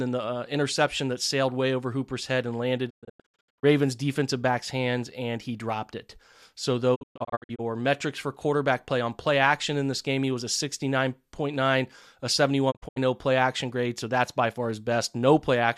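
At 2.89 to 3.65 s, after "head and landed", the speech breaks into a digital broadcast dropout. The receiver muted failed frames, fading out in 20 ms. Holes reach 120 ms. It recurs at 6.94 to 7.61 s, before "metrics for quarterback play", and at 12.70 to 12.98 s, before "play action grade so".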